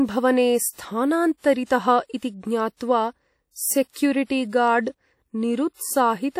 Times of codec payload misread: none

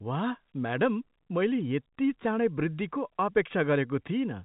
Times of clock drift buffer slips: none

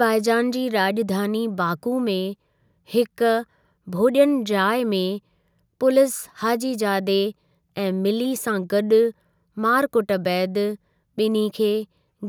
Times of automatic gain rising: none

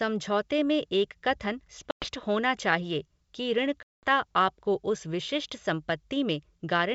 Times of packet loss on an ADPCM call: 1.91-2.08, 3.83-4.05

